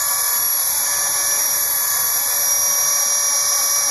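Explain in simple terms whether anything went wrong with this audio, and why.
Channel delay (comb filtering) runs through the whole clip. One side arrived about 0.2 ms late. Mixing to mono cancels evenly spaced frequencies, starting near 3 kHz. This sounds hollow.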